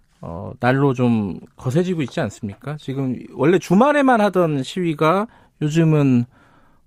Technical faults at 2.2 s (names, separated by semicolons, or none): none